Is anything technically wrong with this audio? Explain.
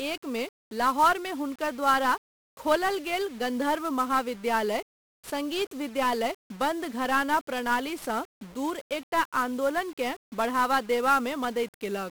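Yes, this speech has been through 1-bit DFPWM compression, and it's there from start to finish. DFPWM keeps just one bit per sample, and each bit only nudges an adaptive level up or down, so the waveform is always being roughly chased rather than captured. The damage here is heavy: the speech sounds fuzzy and crackly throughout, with a strong broadband hiss swamping the top end. The character fits a 1-bit stream running at about 48 kbps.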